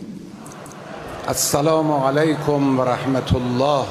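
A nearby DECT cordless phone or base station begins pulsing radio bursts every 10 ms at 1.77 s, and the audio circuitry rectifies them into DECT cordless phone buzz: a steady, thin 100 Hz buzz rich in harmonics, about 25 dB below the sound, continuing to the end.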